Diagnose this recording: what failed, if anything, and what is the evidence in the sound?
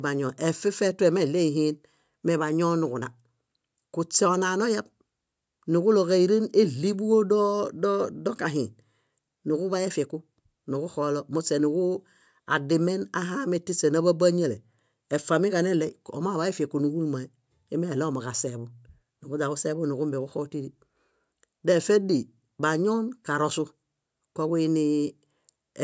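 Nothing failed; only normal call microphone processing is present.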